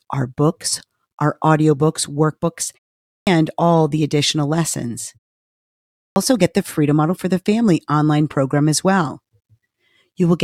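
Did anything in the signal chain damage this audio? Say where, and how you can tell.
Yes. Twice, speech resumes abruptly out of silence with its opening sounds missing: at 3.08 to 3.27 s, after "books our audiobooks workbooks" and a 0.38 s pause, about 190 ms is swallowed before "all the additional lessons". At 5.96 to 6.16 s, after a 0.86 s pause, 200 ms vanishes before "get the". This is a clipped start after a pause at the playback stage. The output device idles during silence and takes around 0.2 s to wake or relock, so the first sound is lost.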